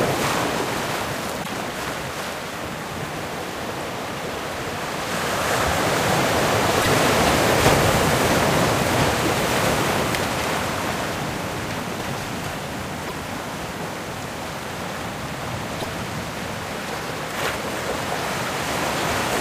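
Four short bursts of damaged data in a compressed stream occur at 1.40 to 1.50, 6.78 to 6.88, 13.02 to 13.12 and 15.77 to 15.86 s. Each lasts about 0.1 s. Corrupted bytes throw the decoder off. It loses frame sync, producing a brief chirp or squawk.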